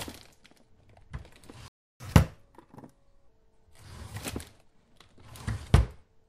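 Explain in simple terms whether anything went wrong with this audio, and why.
At 1.68 s the sound cuts out in mid-flow and stays silent for about a third of a second, until 2.00 s, then picks up where it stopped. This is a playback stall. The player most likely ran short of audio data or was briefly held up by something else on the computer, so it had nothing to send to the speakers until it recovered.

Straight after, from 2.00 s to 3.28 s, the sound runs fast and high-pitched, at 1.25 times normal speed and roughly four semitones up, before settling back. This is catch-up at higher speed. Having fallen behind during the gap, the player rushes through the waiting audio to make up the lost time, and speeding it up this way raises the pitch too.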